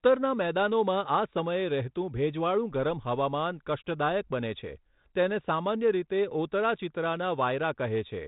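No technical faults can be heard in this recording.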